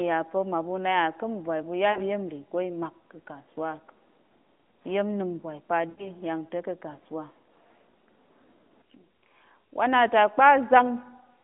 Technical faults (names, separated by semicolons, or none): lost AMR speech frames